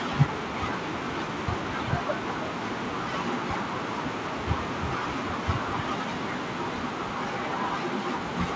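The speech came through a call connection with no faults, its top end stopping at 8 kHz in the way a wideband call codec such as G.722 would leave it.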